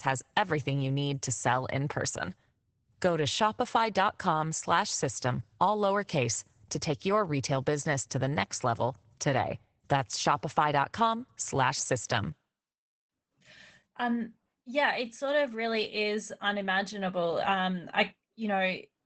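Throughout, Opus voice compression cuts everything above 8.8 kHz. Coarse SILK excitation coding leaves the speech plainly hoarse and slightly robotic, consistent with about 12 kbps.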